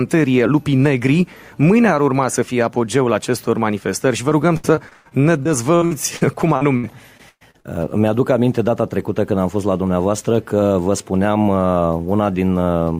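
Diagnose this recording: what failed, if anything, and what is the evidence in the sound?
An automatic gain stage in call processing, likely driven far too hot for the microphone with a fast limiter clamping it, causes gain pumping throughout. The gain is pulled down on every loud sound, a swing of around 5 dB, leaving everything squashed.

Repeated packet loss on the network, heard as robotic sound, runs from 4.29 to 7.66 s. Packets kept going missing, and each hole was patched by stretching the last sound. About 22% of that span is concealed, with gaps up to 119 ms, so it turns choppy.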